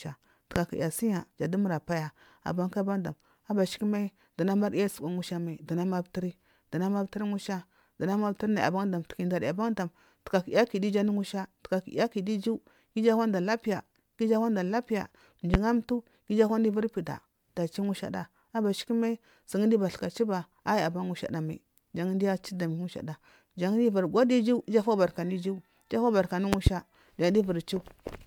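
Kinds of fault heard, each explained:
Generation loss: The speech sounds swirly, smeared and hollow, with blurred attacks, likely from about four passes through MP3 at 128 kbit/s.
Loud pop: Sharp pops about 20 dB above the speech sit on top of the audio at 0.56 s, 15.54 s after "ananda lapiya", and twice at 26.53 s.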